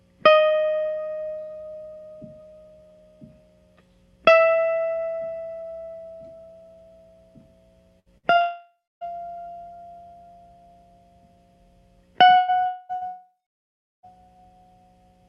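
At 7.99 s and again at 8.18 s the music briefly smears into a held, fading tone before jumping ahead: a burst of packet loss each time, with about 60 ms of audio concealed and then skipped.

From 8.41 to 9.04 s a longer held tone decays into roughly 0.28 s of silence before the music returns further on. This is likely a long network dropout that swallowed about 0.6 s of audio.

At 12.37 to 12.51 s another burst of packet loss stretches and fades the last sound over about 120 ms of missing audio. From 12.66 to 12.92 s the concealment tone holds without ever reaching silence. This is likely a long network dropout of about 0.24 s.

A further burst of packet loss follows at 12.95 to 13.04 s, covering about 60 ms. Then, from 13.07 to 14.06 s, a brief fading tone gives way to roughly 0.7 s of silence, again likely a long network dropout, with nearly a second of music lost.

All of this rides on a WebRTC call path whose Opus coding limits the top end to about 12 kHz, at a bitrate of about 40 kbps.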